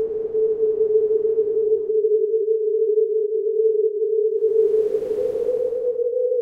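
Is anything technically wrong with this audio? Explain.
Yes. Throughout the clip there is a buzz at 100 Hz, the sign of a resampler restarted on every block. The conversion from 48 kHz to 44.1 kHz was run on each 10 ms block separately, so every block edge was computed without its true neighbouring samples and carries a small error. A hundred such errors per second fuse into a buzz rather than separate ticks. Unlike mains hum, it stops whenever the sound goes quiet.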